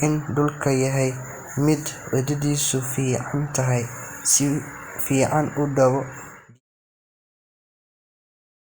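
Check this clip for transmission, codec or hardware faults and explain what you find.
No transmission, codec or hardware faults turn up in the speech, and the only change in level is a deliberate smooth fade-out that begins at about 6 s and ends at 6.61 s, tapering off gradually with no click or hard edge.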